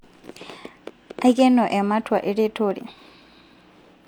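No technical faults can be heard anywhere in the speech recording.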